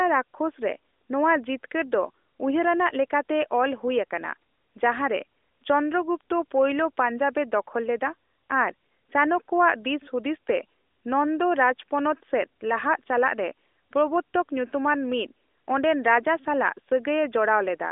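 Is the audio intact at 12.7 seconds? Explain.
Yes, at 12.7 seconds the audio is intact, with the speech passing cleanly through the narrowband AMR-NB mobile path, its band ending below about 3.8 kHz.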